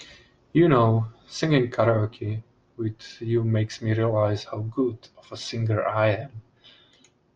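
Speech recording with no audible technical faults: no dropouts, clicks, distortion or timing errors to report.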